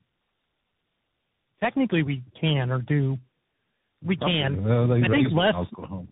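Throughout, the speech passed through tandem speech coding: it was decoded and re-encoded at each link, with a low-rate AMR-type coder feeding a CVSD stage, each degrading the previous one's output. The result is rough, warbly and muffled, with nothing above 3.8 kHz.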